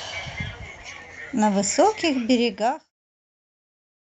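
The speech shows no technical faults: it carries the bandwidth of a call codec, with the top end stopping at about 8 kHz, and the level eases down in a smooth editor's fade-out from around 2 s to 2.93 s.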